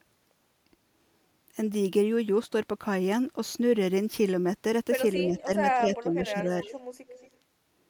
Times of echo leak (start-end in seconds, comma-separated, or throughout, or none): 5.37-5.43, 6.62-6.74, 7.08-7.37